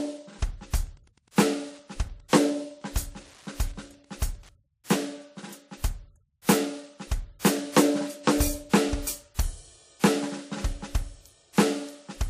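Throughout the music, smeared, swirly artefacts of two distinct kinds sit together, and nothing survives above 15.2 kHz, likely transcoding between lossy codecs, consistent with MP3 re-encoded as WMA. From 0.86 to 4.52 s a faint, steady ticking repeats every 102.4 ms, around 35 dB below the music. This is Wi-Fi interference, with beacon bursts rectified by the audio circuit.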